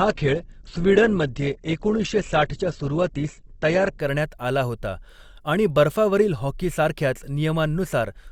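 A speech clip that opens on a low bitrate in an adaptive stream: for the first 4.0 s the treble stops dead at about 8.2 kHz and codec artefacts are stronger, which fits a low-rate Opus stream near 12 kbit/s. At 4.0 s, just before "करण्यात आला होता आणि", quality jumps with no gap, consistent with a step up to around 64 kbit/s. On a spectrogram a flat ceiling suddenly lifts; the waveform stays continuous.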